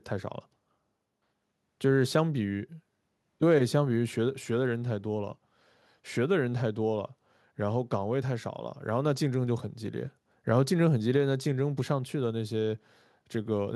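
No technical faults can be heard anywhere in this recording.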